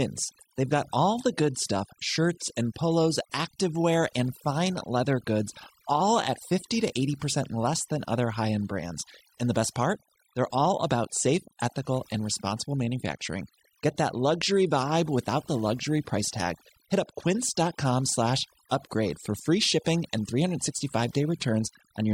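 Speech runs through overdone noise removal for the whole clip. Noise reduction set far too strong makes the background drop and break up into twinkling specks.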